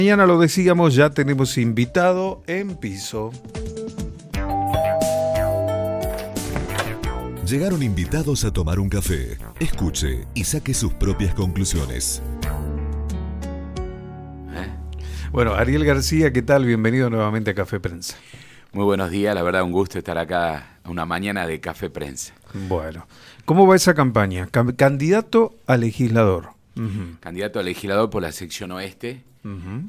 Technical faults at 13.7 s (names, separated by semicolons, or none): none